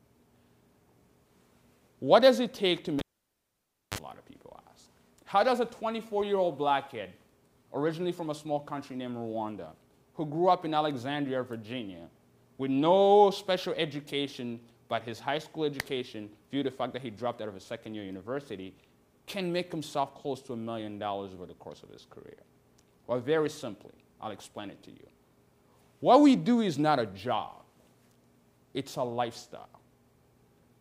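At 2.99 s there's a cable pulled and plugged in: a pop, then nearly a second of near silence, then a brief 39 ms burst of 50 Hz mains buzz as the plug tip makes contact, and another pop when the sound comes back at 3.98 s.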